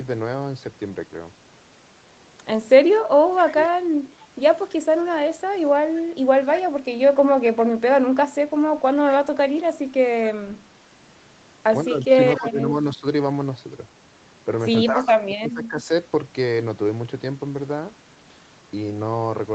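From 12.08 to 13.05 s the speech dips by roughly 15 dB, in pieces adding up to about 400 ms. It sounds like speech suppressed in double talk. The likely cause is an echo canceller that turned down the local talker while the far side spoke. The same happens from 15.05 to 15.91 s, deeper, at roughly 20 dB, over about 700 ms.

Inside the first dip, from 12.37 to 12.47 s, a faint copy of the speech comes back 257 ms late, about 20 dB below the main speech. This is an echo leak. The likely cause is a loudspeaker echo that the far end's canceller left partly in place. The scrap is brief and quiet.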